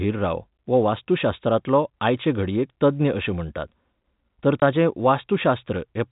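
Packet loss filled with silence, from 4.60 to 4.62 s: the speech drops out for 20 ms, a gap that fits a single lost packet. The receiver had no data for that stretch and played digital silence in its place instead of concealing the gap. The sound stops abruptly and restarts just as abruptly. Through the G.711 telephone coding, the speech keeps its narrow band capped at 4 kHz around the hole.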